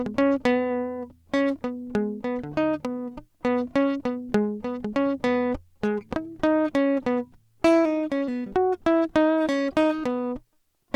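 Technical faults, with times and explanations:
No technical faults can be heard in this music clip. Nothing in the audio calls for a time or an explanation.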